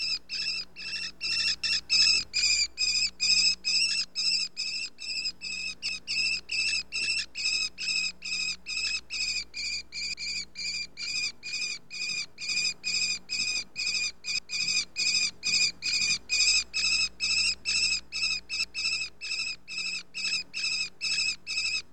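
The sound has channel delay (comb filtering) throughout. One channel lags the other by roughly 20 ms before the mono sum, cutting evenly spaced notches from about 20 Hz upward and giving a rough, slightly doubled sound. Overlapping chunks cause audible stutters at 1.64, 5.89, 10.14, 14.39 and 18.64 s. Each join replays a 250 ms piece, which fits 4 s chunks that start before the previous chunk ends.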